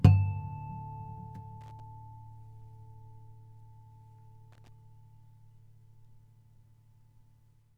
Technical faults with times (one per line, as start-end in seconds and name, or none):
1.61-1.80 loose connector crackle
4.52-4.69 loose connector crackle